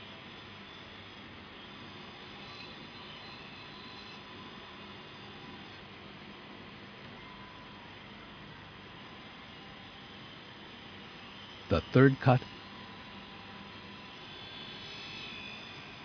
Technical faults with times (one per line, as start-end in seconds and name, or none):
none